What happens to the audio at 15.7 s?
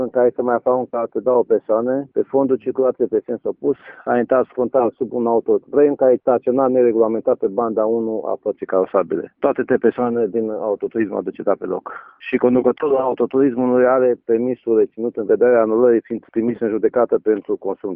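Nothing goes wrong at 15.7 s; the audio plays through that moment without any audible fault.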